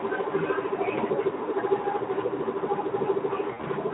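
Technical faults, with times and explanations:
0.96 to 1.00 s, VoIP packet loss concealed by the speech codec: a single lost 20 ms frame is bridged by the decoder repeating its last pitch and spectral shape at reduced gain, so the speech briefly smears into a fading hold before recovering.
3.47 to 3.66 s, VoIP packet loss concealed by the speech codec: five frames go missing, scattered over about 160 ms with a longest gap near 60 ms. Each gap is filled by extrapolation that fades frame by frame, giving a stuttering, weakened stretch. The narrowband, lightly degraded Speex-style coding, which fits a mid-rate setting near 15 kbps, carries that concealment.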